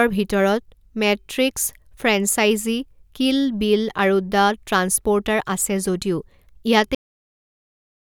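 Speech recording with a cut-off end. At 6.95 s the audio stops mid-sound and drops straight to digital silence, with no natural decay. The silence runs to the end of the file. The final buffers were never written to the file.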